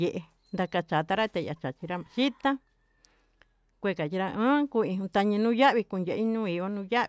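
Nothing in this recording stands out as a technical fault, with no dropouts, clicks, glitches or distortion turning up anywhere along the way.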